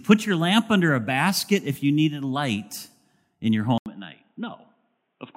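At 3.78 s the speech drops out for 80 ms, then returns dull and boxy, with nothing above 3.8 kHz, roughly 5 dB quieter and over a new noise floor about 50 dB down. This is likely an input switched to a poorer device, lasting to the end.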